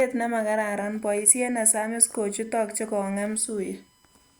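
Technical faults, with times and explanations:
0.80 to 4.40 s, USB whine: a steady 1 kHz tone with its strongest component at 8 kHz, about 40 dB below the speech, from USB frame current leaking through power or ground.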